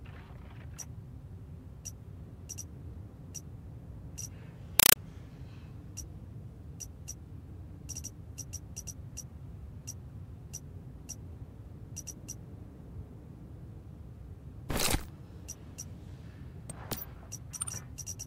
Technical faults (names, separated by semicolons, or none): compressed stream played as audio